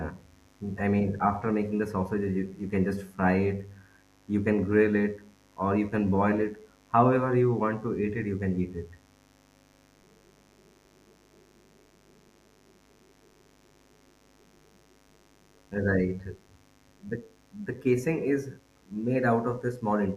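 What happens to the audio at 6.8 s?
At 6.8 s the speech carries mains buzz, present throughout the clip, not just at that moment. Sharp switching spikes at twice the 50 Hz mains rate add a raspy drone well below the speech. A spectrogram shows evenly spaced horizontal harmonic lines climbing into the kilohertz range.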